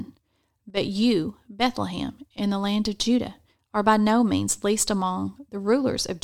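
Speech, with one brief fault early on: from 0.70 to 0.77 s the level falls abruptly by about 6 dB and then jumps back. That's a one-channel drop-out. The likely cause is that one side of a stereo feed went missing for about 70 ms, so once the channels get summed to mono, the shared content loses half its amplitude, and anything that lived only on that side disappears until it comes back.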